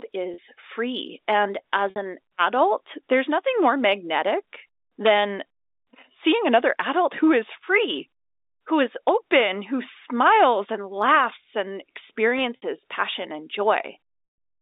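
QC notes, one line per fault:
0.34–0.38, 1.90–1.96, 12.56–12.62 and 14.24–14.38 s, packet loss with pitch repetition: audio packets went missing and the receiver refilled each gap by looping the last pitch period. The 40 and 60 ms gaps, including those just before "an adult" and "passion and", come out as brief held buzzy tones. The 140 ms gap at the end lasts longer than the fade and drops into silence before the sound resumes.
5.06–5.10, 9.09 (between "who is" and "open who") and 10.27–10.44 s, integer overflow: a sum in the processing ran past the largest integer and wrapped to the opposite sign instead of being limited, so the peaks flip across the full range. The result is harsh, violent cracks on loud moments, sharper than ordinary clipping. These sit over the narrow 300 Hz to 3.7 kHz telephone band of the G.711 A-law line.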